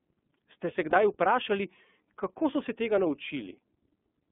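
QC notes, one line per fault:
throughout: iLBC codec. The speech is squeezed into a telephone band of roughly 200 Hz to 3.5 kHz, so it sounds thin and boxed-in. The codec damage is plainly audible as a rough, slightly synthetic edge on the voice. iLBC codes each 30 ms frame's excitation on its own, without borrowing from the frame before, so fine detail gets coarsened frame by frame. The sound fits iLBC's 13.33 kbps mode.
0.90–0.94 s: lost iLBC frames. A 30 ms gap, which points to a single lost frame, is filled by the decoder. It repeats the last pitch cycle and mixes in noise, so the gap comes out as a brief held, faintly buzzy vowel. Because each iLBC frame stands alone, the voice returns cleanly right after the gap.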